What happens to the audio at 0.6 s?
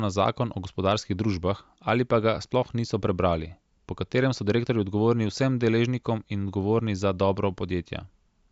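Nothing goes wrong at 0.6 s; the audio there is intact and plays through cleanly.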